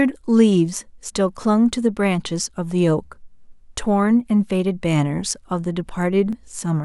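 Clock drift buffer slips run from 0.18 s to 6.33 s as a regular click in the speech every 1.53 s, about five in all. The likely cause is two independent clocks a few hundred parts per million apart, forcing a buffer to drop or repeat a few dozen samples each time.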